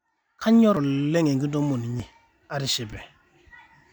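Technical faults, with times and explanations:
0.42 s to 3.92 s, sudden gain jump: The digital gain most likely stepped up from one sample to the next, as when a level setting or bit shift takes effect without any ramp. At 0.42 s the speech and the background noise leap together by about 22 dB, with an abrupt edge and no fade, and stay at that raised level to the end of the clip. Because the floor rises along with the voice, the change reads as a gain step rather than a louder talker.
0.77 s, 2.00 s and 2.93 s, dropped buffer (overrun): The software failed to read its input in time, so the hardware overwrote samples that had not yet been collected. The likely result is that stretches of audio are simply missing and the surrounding material is spliced together. No gap of silence is heard. Each point gives a sudden skip in the speech. About 70 ms is lost at 0.77 s, and about 20 ms at each of the other two.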